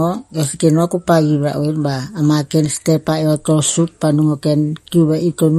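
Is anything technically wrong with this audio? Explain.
Yes. Throughout the speech, nothing sounds above 15.3 kHz, and the sound has a watery, swirling quality: likely MP3 compression, pointing to about 48 kbps. Unlike a plain low-pass filter, it switches weak frequency lines on and off.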